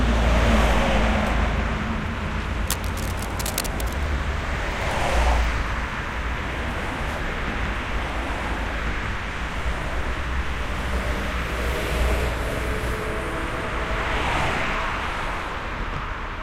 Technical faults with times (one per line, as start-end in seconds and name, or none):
2.68-4.03 cable scratch noise